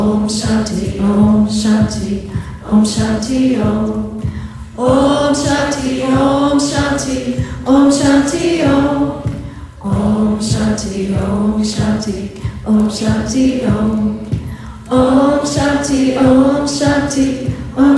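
Nothing stood out on listening; no technical problem could be heard anywhere in the recording.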